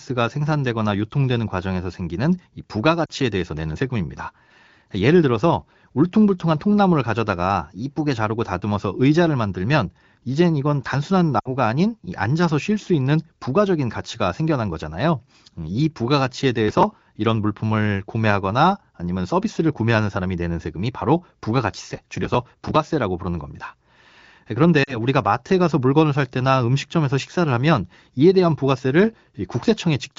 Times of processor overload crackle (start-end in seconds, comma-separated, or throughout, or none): 16.68-16.92, 21.94-22.75